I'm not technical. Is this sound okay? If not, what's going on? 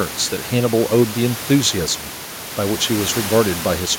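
Yes, the recording has no technical problems, and the quiet background noise you may notice is simply the room where the microphone was, not something going wrong with the system.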